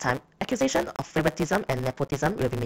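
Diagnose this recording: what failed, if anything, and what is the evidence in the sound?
A block size mismatch (truncated) between buffer stages: one stage writes longer blocks than the next reads, so each block's tail is discarded. The speech runs about 1.6 times fast at near-normal pitch, with a steady 138 Hz buzz at the block rate, which fits 512-sample blocks being written.

At the codec, corrupt frame muted: damaged compressed frames were rejected by the decoder and replaced with silence. Abrupt holes appear at 0.96 to 1.00 s and 2.08 to 2.12 s, roughly 40 ms each, pointing to two and three lost frames. Timing stays intact around them.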